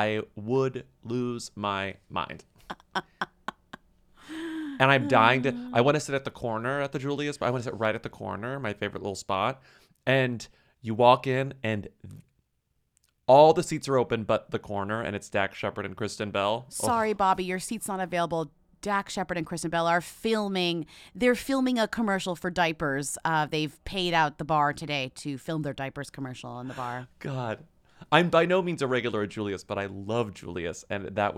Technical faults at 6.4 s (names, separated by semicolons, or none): none